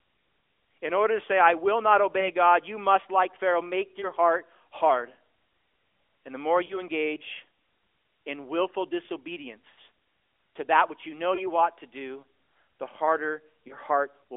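At 2.2, 4.0 (just before "heart hard"), 6.66 (after "the more"), 9.7, 11.36 (between "that which you know" and "ought to do the") and 13.68 s there are lost AMR speech frames. Corrupted frames failed their checks, and the decoder filled each gap by repeating the last good pitch and spectral shape at lower gain. Most are brief dips of about 20 ms. The 6.66 s gap sounds like two frames, and the 9.7 s gap is a longer smeared fade.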